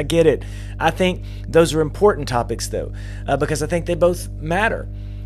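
Mains hum runs from start to finish under the speech, a steady low drone at 50 Hz with a few low harmonics stacked above it. The power line is leaking into the signal path, most plausibly through a ground loop between connected equipment or magnetic coupling from a nearby transformer. The hum sits only about 10 dB below the speech, so it never drops into the background and stays clearly audible even while words are being spoken.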